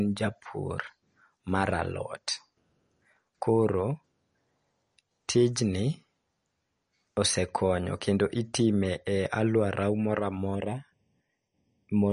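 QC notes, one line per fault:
Throughout: MP3 compression. Nothing is present above 10.6 kHz, so the treble sounds cut off. Speech has a watery, swirling texture. Weak frequency detail flickers on and off between frames, likely from encoding at a low bitrate around 40 kbps.
10.55 s to 12.12 s: channel delay (comb filtering). One channel arrives a fraction of a millisecond late, roughly 0.4 ms. When the channels are summed, shared content cancels at evenly spaced frequencies, with the first notch near 1.5 kHz. The speech turns hollow and phasey.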